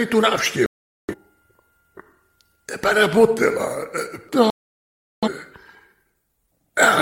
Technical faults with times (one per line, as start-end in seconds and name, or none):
0.66-1.15 digital broadcast dropout
4.50-5.29 digital broadcast dropout